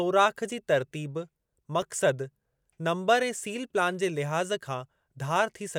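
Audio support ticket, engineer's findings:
Brief click, almost a tick rather than a stutter, in the speech at 1.82 s and again at 3.45 s just before "प्लान जे". Repeated buffer in the playback output path: the next block arrived late, so a 5 ms buffer was played one extra time with a hard join each side. Buffer too short to hear as a repeat, so only the discontinuity comes through as a click. A few milliseconds of audio lost at each point.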